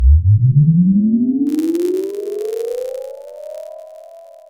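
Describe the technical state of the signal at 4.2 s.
At 4.2 s the sound is inside a block size mismatch (padded) running from 1.46 s to the end. Each block is topped up with zeros, so silent gaps recur at 91.5 Hz, giving a buzz. The waveform shows evenly spaced flat dropouts, and the spectrogram shows regular vertical stripes. Playback runs slightly slow (0.996×) at near-normal pitch.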